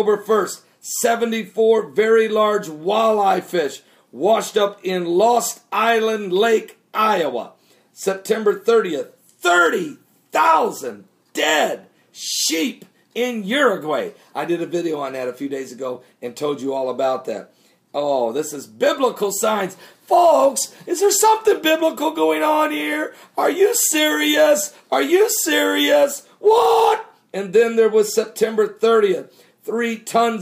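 No technical faults are audible.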